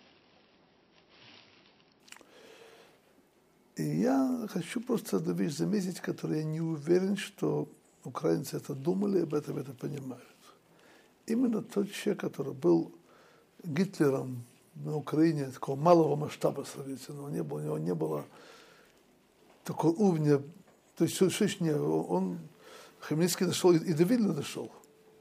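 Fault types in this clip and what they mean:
Adaptive stream starting at a low bitrate: the player began on a low-quality version and stepped up at 2.0 s. Until then the sound is dull and smeared, consistent with 24 kbit/s MP3. A spectrogram shows a flat ceiling at 5.8 kHz, then sudden full treble, with no gap in the waveform.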